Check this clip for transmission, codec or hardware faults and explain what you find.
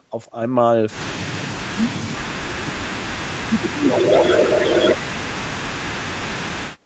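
Two call faults appear in the second half of the clip, both tied to echo cancellation.

From 3.41 s to the end, the speech is suppressed in double talk. The voice dips and breaks up, falling at its deepest by around 40 dB. This is likely an echo canceller mistaking the talker for loudspeaker echo while the far side spoke, and attenuating everything.

From 3.9 s to 4.94 s, there is an echo leak. A delayed copy of the voice arrives about 273 ms late, at roughly the same level as the direct speech. Some loudspeaker pickup has likely slipped past the canceller and been sent back, so the talker seems doubled.

The audio stops near 8 kHz, which fits the bandwidth of a wideband call codec such as Opus.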